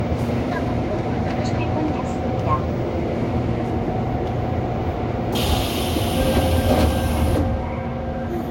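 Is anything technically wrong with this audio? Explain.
Yes. Generation loss runs through the whole clip. The sound was likely re-encoded about three times with a lossy codec near 60 kbit/s. Each pass quantised on a new frame grid, stacking noise. It sounds swirly and hollow, with blurred attacks and nothing above 16.6 kHz.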